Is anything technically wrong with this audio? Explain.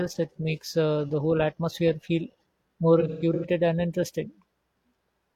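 Yes. From 3.00 to 3.45 s, after "whole atmosphere feel more" and before "and interesting", there is AAC frame loss with concealment. About 256 ms of frames went missing, scattered, with the longest gap around 150 ms. The decoder patched gaps from earlier spectra, giving smeared, noisy, phasey patches.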